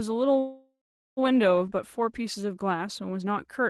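From 0.39 to 1.19 s there's a call audio freeze: the speech stops, the last bit of sound gets stretched into a fading buzzy tail, and roughly the back half of that stretch is plain silence before things pick up exactly where they left off. Nothing's actually lost; about 0.78 s of delay just gets wedged in. The likely cause is packets stalling in transit so the jitter buffer ran dry. The call-codec band limit sits around 12 kHz.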